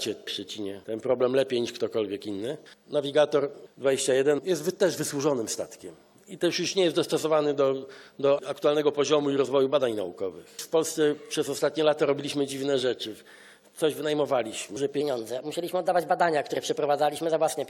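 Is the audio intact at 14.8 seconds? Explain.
No. At 14.76 s the sound jumps abruptly forward with a brief blip, as though a stretch of the programme has gone missing. This is likely a stream segment skipped: one segment of the segmented stream failed to load, and playback resumed at the next one.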